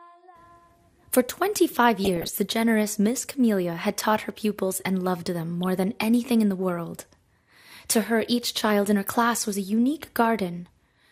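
Throughout, the sound is dull and gurgling, with upper bands flickering out. This is likely MP2 compression, and it fits a starved stream near 80 kbps. DAB burbling erupts from 2.03 to 2.33 s, then briefly from 5.63 to 5.69 s. Corrupted bits put wrong samples into single sub-bands, giving short blips of noise, and wrong scale factors can throw sub-bands off level for up to a frame.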